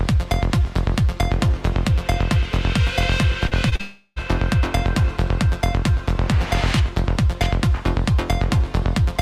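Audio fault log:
3.47–3.81 s, short concealed packet loss: brief gaps of 20 to 40 ms at 3.47, 3.69 and 3.76 s. Each is filled by continuing the preceding sound, heard as quick smears.
3.81–4.18 s, long network dropout: about 360 ms of audio is lost, likely from a stalled stream. A fading continuation fills the whole gap, then the audio resumes later.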